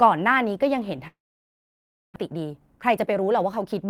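From 1.07 s to 2.18 s, a long network dropout is the likely cause of a stretch where no audio reached the receiver. The receiver tried to cover the gap by extending the last sound briefly as a fading buzz, but nearly a full second of the 1.1 s span ends up as silence. When the speech resumes, about 0.6 s of it is simply gone, and the stream now runs roughly half a second later than before.

From 2.22 s to 3.81 s, a jitter buffer speed-up follows. Delayed audio arrived in a bunch, leaving the buffer holding too much. To claw back that excess delay, the receiver repeatedly cut out tiny slices of one or a few pitch periods, dropping around 0.4 s in total. The speech plays at about 122% of normal speed with its pitch unchanged, so it sounds hurried until the buffer settles near the end.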